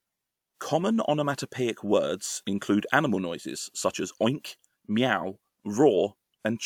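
No technical faults can be heard anywhere in the speech recording. Nothing in the sound calls for a timestamp or a closer look.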